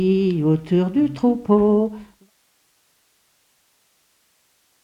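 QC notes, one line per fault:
No faults found: the signal holds steady, with a smooth editorial fade-out that begins at about 1.5 s and reaches silence at 2.32 s, with no hard edge or click.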